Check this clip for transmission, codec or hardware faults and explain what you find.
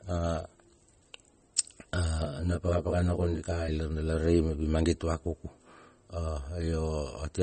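Two problems stand out: codec damage across the whole clip, and a short stretch of comb filtering in the middle.

The first runs throughout, and it's most likely MP3 compression. The top end stops dead at about 8.3 kHz, and the speech carries plainly audible watery, swirly artefacts. That's what happens when the encoder runs short of bits: it throws away weak frequency lines, which then flicker in and out from frame to frame, and it cuts the treble at a fixed point. The amount of damage fits a low bitrate, somewhere around 32 kbps.

The second is channel delay (comb filtering), from 2.25 s to 3.68 s. One channel arrives about 20 ms behind the other, and the two get summed to mono. Anything common to both then cancels at evenly spaced frequencies, with notches starting down around 20 Hz. Because the offset is well over 10 ms, the result sounds rough or slightly doubled rather than just hollow, and it clears up once the stretch ends.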